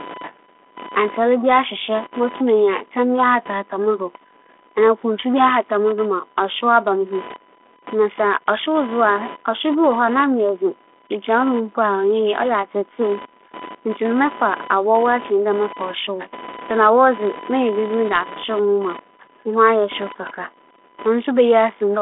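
Speech over a telephone-band line carries computer activity noise for its whole length: a buzzing, chirping layer pulsing at around 1 kHz, sitting roughly 20 dB below the speech and rising and falling independently of it. Processor, graphics or mouse load shifting the audio circuit's shared ground causes this. On a spectrogram it shows as a comb of lines near 1 kHz and its harmonics running through pauses. The waveform shows a fine ripple where the speech is silent. The G.726 coding, consistent with 32 kbit/s, leaves nothing above about 3.8 kHz.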